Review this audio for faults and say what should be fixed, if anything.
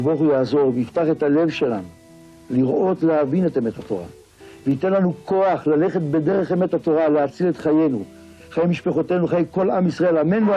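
Nothing here needs fixing; I listened through and didn't catch any faults worth flagging.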